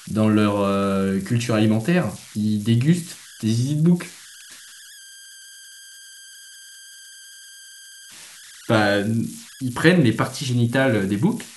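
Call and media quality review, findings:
Converter idle tones, throughout the speech: whistle near 1.5 kHz in pauses, grainy noise under quiet syllables, at about -22 dB relative to the signal. Probable component: an undithered delta-sigma converter locking into repeating bit patterns at low input. Spectrogram: a thin, persistent horizontal line around 1.5 kHz, clearest in the gaps between speech. Waveform: a low-level periodic ripple that never settles to silence.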